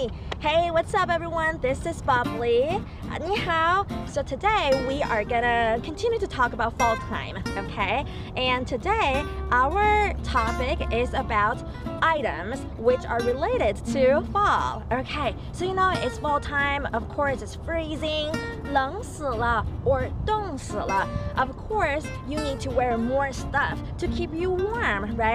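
At 12.94 s a DC step occurs: the zero line of the waveform jumps suddenly by about -33 dBFS, as if an offset had been switched into the signal path. It is heard as a single low thump or click while the sound carries on unchanged. The offset does not hold; a 20 Hz high-pass pulls it back toward zero. On the waveform the baseline lurches and then drifts home, and a spectrogram shows a brief broadband flash with energy concentrated at the very bottom.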